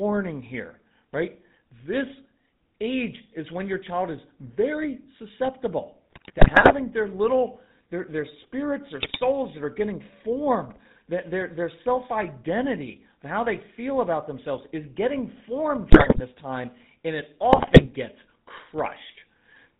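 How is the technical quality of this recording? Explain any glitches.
The speech quality is poor, with plainly audible codec roughness throughout and four bursts of corruption.

Throughout, GSM full-rate codec coding, consistent with a 13 kbps stream, makes the speech buzzy and gravelly. Its pulse-driven vocal-tract model discards fine detail. A spectrogram shows nothing above 4 kHz.

GSM bit errors occur at 6.10–6.73 s (after "child is very susceptible"), 9.02–9.19 s, 15.90–16.21 s (after "themselves is getting formed") and 17.52–17.87 s (after "time and it"). Corrupted filter, pitch and gain values produce squawks and gargling. A spectrogram shows smeared frames, and the waveform shows level spikes.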